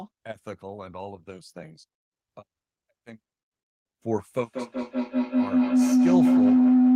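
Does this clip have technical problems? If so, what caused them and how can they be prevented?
Yes. Feedback howl runs from 4.37 s to the end: a microphone-to-loudspeaker loop gains level each pass, with repeats roughly every 200 ms, building a tone near 300 Hz that peaks about 10 dB above the speech. Prevent it by muting one of the co-located devices or using headphones.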